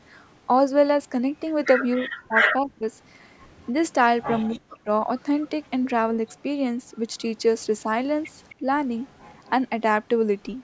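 Speech suppressed in double talk occurs in this speech recording from 1.96 to 2.87 s, 4.52 to 4.9 s and briefly at 8.6 s. The voice dips by up to around 35 to 40 dB, most likely because an echo canceller treated overlapping talk as echo. Echo leak appears at 3.45 to 4.48 s, 5.44 to 5.67 s, 6.29 to 7.23 s and 8.49 to 9.5 s as a faint copy trailing 264 ms behind, about 25 to 35 dB down, likely residual loudspeaker pickup the canceller missed.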